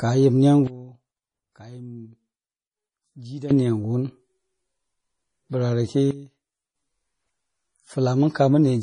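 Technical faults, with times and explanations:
Throughout: MP3 compression. The speech sounds heavily watery and swirly, with nothing above 10.6 kHz. This likely comes from an encoder short of bits, consistent with roughly 32 kbps.
0.67–3.51 s and 6.11–6.76 s: sudden gain jump. The level drops abruptly by about 16 dB, then about 14 dB, with speech and background falling together. An unramped digital gain change is likely.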